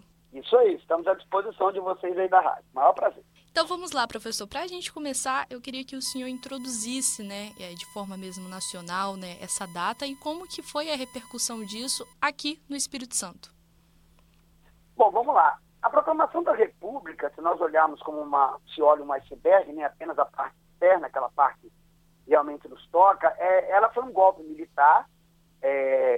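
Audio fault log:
6.06–12.13 s, USB whine: a steady, fixed-pitch tone at 1 kHz, strongest at that fundamental and sitting roughly 30 dB below the sound. The bus pulls current in bursts once per 1 ms frame, and that periodic draw rides on the shared power or ground into the analogue input. A repeating load every millisecond produces exactly this 1 kHz whine for the six seconds it persists, unrelated to anything in the audio itself.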